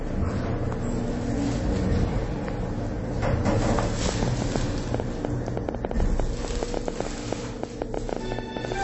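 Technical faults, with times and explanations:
throughout, MP3 compression: plainly audible watery, swirly texture, smeared attacks and nothing above 8 kHz, likely from MP3 encoding at a low bitrate, about 32 kbps.
4.09 to 8.73 s, train of clicks: around 40 clicks at an irregular 7.6 per second, about 20 dB above the sound, likely from interference or a faulty connection or power supply.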